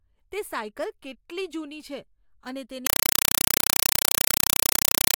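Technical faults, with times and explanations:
2.87–5.18 s, compressed stream played as audio: right after "કેટલી જૂની છે અને" the speech turns to loud chattering static, 4 ms noise bursts 31 times a second, from an undecoded AC-3 stream, likely around 192 kbps.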